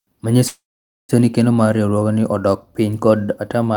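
From 0.47 to 1.12 s, a call audio freeze, likely from delayed packets, stretches then silences the sound; speech resumes intact, unlike a dropout.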